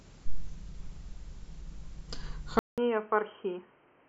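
At 2.59 s the speech drops out for about 0.19 s, then returns dull, quieter and band-limited to 3.2 kHz, over a faint new noise floor, likely an input switched to a poorer device.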